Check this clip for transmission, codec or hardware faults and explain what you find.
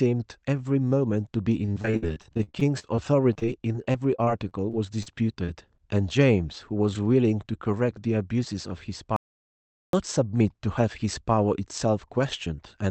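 The clip has three kinds of transmission fault: repeated packet loss, a dropout to silence, and two jitter-buffer speed-ups. They sit on top of a call codec whose sound fits Opus at around 32 kbps, with content stopping near 8 kHz.

Repeated packet loss (robotic sound) runs from 1.65 to 5.81 s. Packets went missing around thirty times, the longest gap 54 ms. The receiver patched each hole by extending the previous sound, so about 17 % of the stretch is synthetic. The speech turns choppy and robotic, with fragments missing.

Audio dropout to silence occurs from 9.16 to 9.93 s. The input signal was likely lost, and the recorder kept writing silence for about 0.77 s. The speech cuts out to silence with no room tone, then resumes mid-flow with that stretch gone.

Jitter buffer speed-up appears at 10.19 to 10.41 s (112 % speed) and 12.10 to 12.85 s (105 %). The buffer held excess audio and trimmed roughly 40 ms in each stretch by removing pitch-period slices. 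The speech sounds briefly hurried while pitch stays unchanged.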